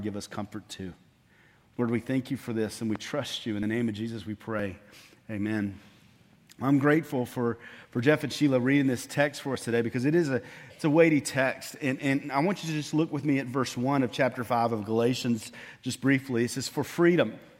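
At 2.96 to 2.98 s a single loud pop sits on top of the sound. It peaks roughly 10 dB above the surrounding level. It is heard as one sharp thump, and the sound carries on underneath it. The cause is likely a brief voltage pulse, such as from static, a switch or a driver glitch. That pulse was added to the signal and then shaped by the circuits after it.

Next come tiny skips from overlap between stream segments. They fall at 3.63, 4.59, 6.59, 9.55, 15.54 and 16.51 s. The spacing follows whole multiples of about one second, which fits 1-second stream segments. At each boundary, two segments claimed the same time span. The player then cut the overlap from audio that was not really doubled. Between 8 and 24 ms of sound vanished each time. The waveform jumps, giving a small click or tiny skip.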